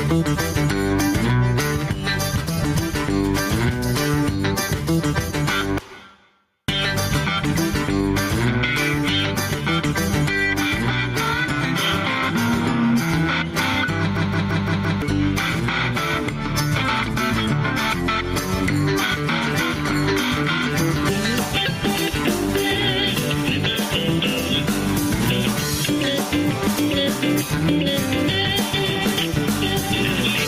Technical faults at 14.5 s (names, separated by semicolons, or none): gain pumping; system hang loop